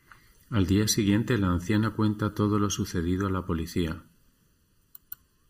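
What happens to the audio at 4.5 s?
At 4.5 s the speech carries the same channel delay (comb filtering) heard from start to finish. One channel lags the other by about 0.7 ms, and when the two are summed to mono, shared content cancels at evenly spaced frequencies, the first around 700 Hz. The result sounds hollow and phasey. A spectrogram shows fixed horizontal dark bands at regular intervals up the spectrum, unchanged as the speech moves.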